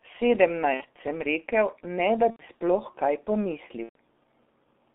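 From start to finish the speech sounds muffled and hoarse, with soft, smeared consonants and nothing above roughly 3.6 kHz or below 250 Hz. This is heavy G.723.1 codec damage. The coder's 30 ms frames and slowly updated voice model cannot follow fast articulation, so detail is averaged away. The thin, rough quality fits a rate of around 6.3 kbit/s.

At 0.74 to 0.83 s, just before "sem rekel ne da", the sound smears into a buzzy tone or coloured noise that fades. The same happens at 2.30 to 2.43 s, between "sem rekel ne da" and "sploh kaj", and again at 3.83 to 3.95 s. Each is VoIP packet loss concealed by the speech codec. The decoder repeats its last pitch and filter at falling gain to cover the gaps. The gaps grow from about 60 to 90 to 120 ms, which fits two, three and four missing 30 ms frames. Because each frame builds on the previous one, the speech stays weak briefly after each gap.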